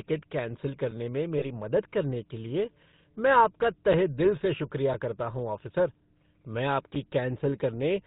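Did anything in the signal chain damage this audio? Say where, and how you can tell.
Yes. Three faults are present, at the codec, network and playback stages.

The whole clip has passed through the GSM full-rate codec, here at 13 kbps, and the damage is plainly audible. The speech has a buzzy, gravelly roughness because the codec rebuilds the voice from a vocal-tract model driven by coarse, regularly spaced pulses. On a spectrogram, energy stops abruptly at a ceiling of 4 kHz, and the voiced regions show harsh, evenly spaced vertical striations from that pulse excitation.

Lost GSM frames occur from 1.38 to 1.45 s, just before "मदद करने के लिए". About 40 ms is missing, which fits two lost 20 ms frames. The decoder concealed the loss by repeating the last good frame's parameters, so the sound is held as a short, rough metallic ring instead of dropping out. On a spectrogram this shows as a smeared, frozen spectral slice.

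A gap between chunks appears at 6.95 s, right after "करता हूँ ऑफ़िसर मैं". It is a hole of about 7 ms with hard edges, where the waveform drops to silence and then resumes abruptly. No speech is lost, but the flow is interrupted at the join. This points to storage or playback handling the audio in 1 s chunks, with padding or a late start inserting silence at the boundary.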